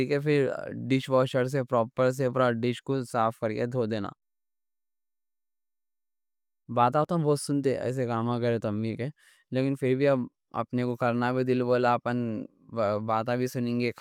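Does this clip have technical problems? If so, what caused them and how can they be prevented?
No, there are no technical problems to report in this speech clip. With nothing gone wrong, there is no cause to trace and nothing that needs preventing.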